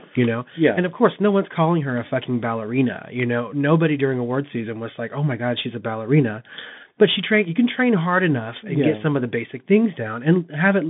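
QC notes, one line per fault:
Throughout, Bluetooth CVSD headset codec: the speech sits in a narrow phone-like band of about 150 Hz to 3.6 kHz, with nothing above 3.7 kHz, which fits a 64 kbit/s CVSD headset link. The codec sends just one up-or-down bit per sample with an adapting step, so fast loud high content outruns it and smears. The damage is plainly audible: scratchy s sounds and a grainy hiss sitting under the speech.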